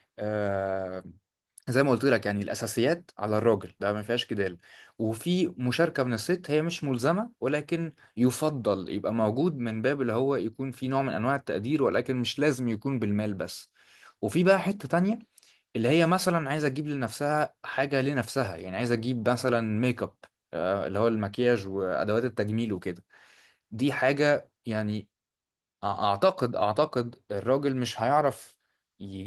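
No technical faults can be heard in this speech.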